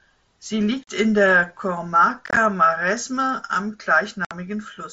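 Unconcealed Bluetooth headset packet loss punches abrupt holes into the speech at 0.84–0.88 s, 2.26–2.37 s (scattered, choppy) and 4.25–4.31 s. Lost headset packets were replaced by silence or an idle pattern, not concealed.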